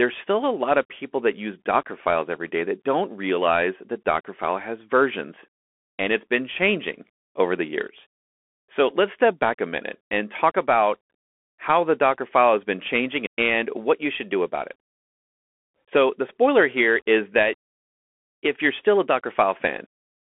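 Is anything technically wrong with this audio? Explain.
Yes. For the whole clip, the speech runs through a Bluetooth CVSD headset codec. This narrowband one-bit delta modulator, consistent with a 64 kbps stream, signals only up or down per sample while its step size adapts. Loud high components outrun the step and distort, s sounds turn scratchy, and a granular hiss sits underneath. The band is squeezed to roughly 250 Hz–3.4 kHz. A spectrogram shows a hard ceiling at about 3.8 kHz and an empty top. The waveform carries a grainy noise floor and rounded, lagging steep edges.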